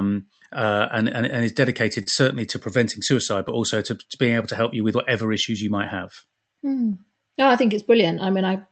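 Right from the start there's clock drift between sender and receiver: the sending side's clock runs about 2 percent slow, so the jitter buffer keeps draining and the receiver has to keep patching the timeline. You hear it as small, uneven timing hiccups across the whole recording.

Those patches show up as repeated timing corrections from 0.26 s to 8.16 s. The receiver keeps stretching short bits, all in the same direction, so the speech runs at 98 percent speed and picks up roughly 150 ms in total. The result is a slightly unsteady tempo with little stutters at irregular spots.

At 2.03 to 2.08 s there's a short stall from a late packet. The buffer ran dry, so the receiver held the last sound for 31 ms until the packet turned up, then carried on from the same point. Nothing's missing, just a briefly smeared, held moment.

The audio also came through an Opus call path with the top end cut at 8 kHz, consistent with a bitrate around 32 kbps.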